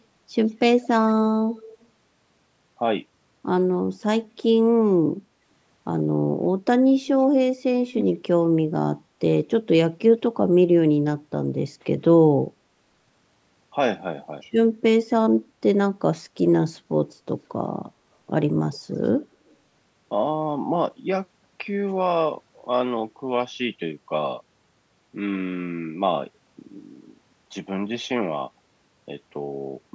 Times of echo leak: 0.82-0.87, 1.57-1.86, 7.06-7.23, 7.88-8.17, 18.73-18.79, 19.21-19.55

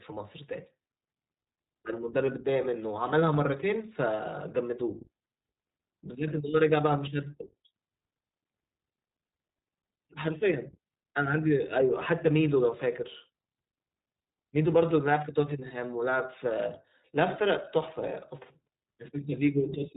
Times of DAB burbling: none

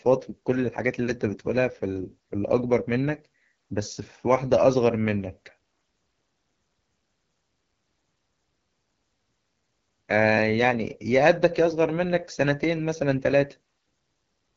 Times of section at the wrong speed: none

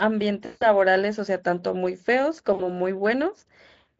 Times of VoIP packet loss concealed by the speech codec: 0.45-0.67, 2.53-2.69

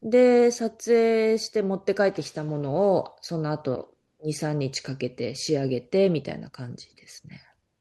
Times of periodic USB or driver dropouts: none

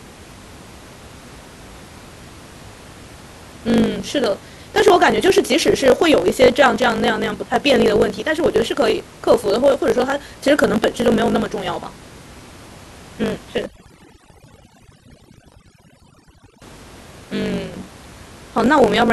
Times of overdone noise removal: 13.65-16.61

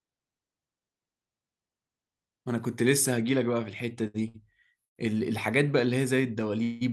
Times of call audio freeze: 6.63-6.83

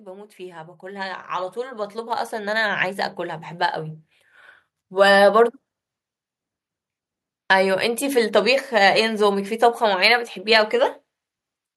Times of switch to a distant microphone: none

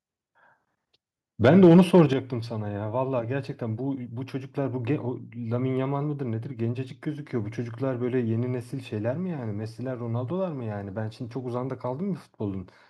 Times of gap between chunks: none

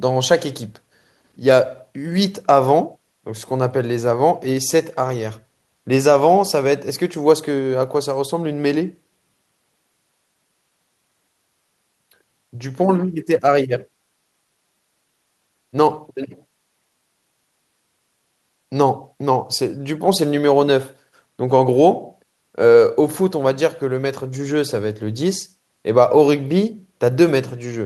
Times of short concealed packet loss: none

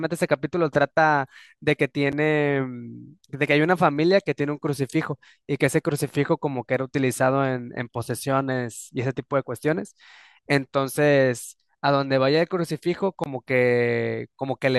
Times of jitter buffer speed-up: none

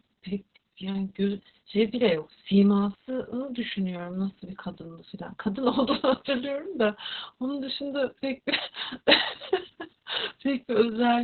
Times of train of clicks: none

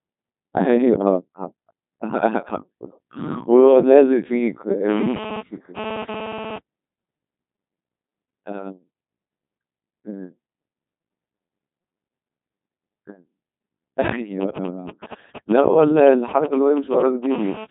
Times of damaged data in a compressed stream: none

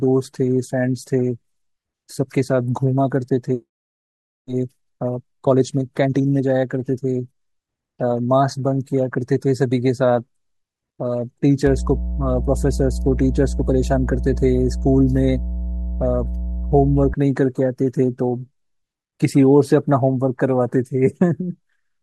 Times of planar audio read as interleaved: none

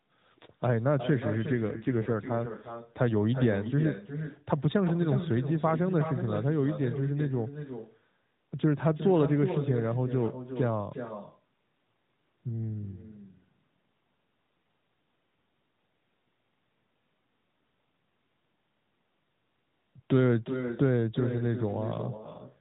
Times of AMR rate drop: 1.66-3.00, 22.24-22.59

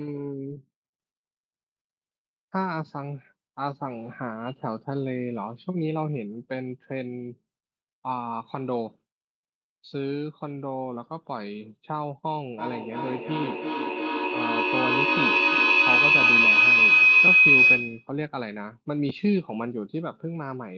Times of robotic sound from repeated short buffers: none

